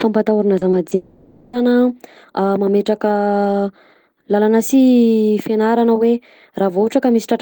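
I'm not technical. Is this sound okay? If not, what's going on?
No. At 0.59, 0.71 and 0.89 seconds there is short concealed packet loss. Tiny bits of speech went missing, and the receiver filled each hole with a brief smear.

From 0.95 to 1.55 seconds the speech turns into a stretched, buzzy imitation of itself. This is likely a long network dropout, with the lost speech patched over.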